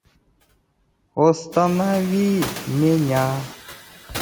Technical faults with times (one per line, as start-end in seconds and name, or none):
0.00-4.21 noise suppressor artifacts